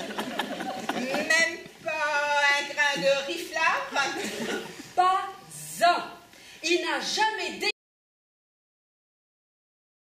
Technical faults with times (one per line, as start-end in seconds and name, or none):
7.71-10.19 audio dropout to silence